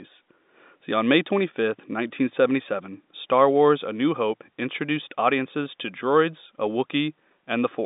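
The speech arrives through G.711 telephone coding, its band limited to roughly 200 Hz to 3.7 kHz with nothing above 3.8 kHz, which fits a 64 kbps A-law line, and no technical faults can be heard in the clip.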